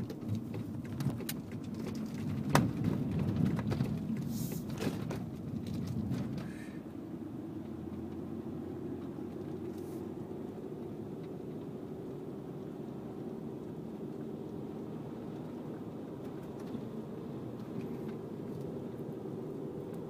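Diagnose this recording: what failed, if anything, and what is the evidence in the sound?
Nothing failed in this recording. No stage of the chain, from the analogue wiring through to playback, leaves anything in the sound that points to a fault.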